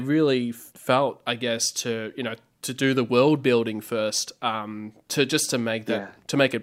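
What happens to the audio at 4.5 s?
Nothing goes wrong at 4.5 s; the speech runs on intact through that moment, with no dropout, click or distortion to be heard.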